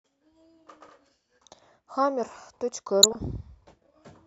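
DAB burbling appears twice, from 0.73 to 0.93 s and from 3.03 to 3.18 s. In each stretch, bit errors at well under one percent slip past error correction into the MP2 stream. Corrupted samples put short blips of noise into individual sub-bands, each burst pointing to around ten damaged frames. The result is burbling laid over the speech. Unlike a dropout, the sound never goes silent, and unlike steady codec swirl, the burbling comes in brief bursts.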